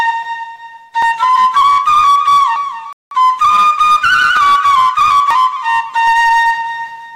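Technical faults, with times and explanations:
1.02, 2.56, 4.37, 5.31 and 6.07 s, dropped buffer (overrun): each is the sound jumping ahead, about a tenth of a second missing, nearer a third at 6.07 s. Likely unread samples overwritten. Waveform shows abrupt splices without gaps; spectrogram shows vertical broadband lines.
2.93 to 3.11 s, rebuffering stall: the audio stops dead into silence for about 185 ms, then resumes exactly where it left off, so nothing is lost but time is added. The waveform shows a flat gap, and the spectrogram shows a blank vertical band.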